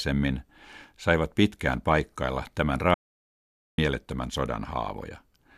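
Right after "saivat pitkään paikkailla tämän", at 2.94 s, the speech cuts off mid-flow into dead digital silence with no room tone, returning at 3.78 s. This audio dropout to silence erases about 0.84 s, most likely from the input briefly failing while zeros kept being written.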